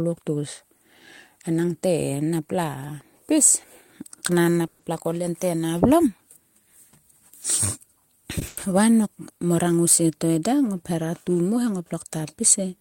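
At 4.67 to 4.81 s there's a call audio freeze: the speech stops moving forward and the last sound is drawn out as a fading buzz or hiss for about 120 ms, likely because packets got held up in transit and the jitter buffer ran dry. When it picks up again, nothing's been skipped; everything after just lands 120 ms later.

Then at 8.39 to 8.43 s you get a short stall from a late packet. One packet simply wasn't there in time, so the receiver stretched the last sound by about 20 ms, giving a slightly held moment with a faint buzz or dip before carrying on from the same spot with nothing lost.

Right after, at 8.47 to 8.59 s, comes a burst of packet loss. About 100 ms of audio never made it, so the receiver kept the last sound going and faded it down across the gap. When the speech comes back it has jumped ahead, and that 100 ms is gone.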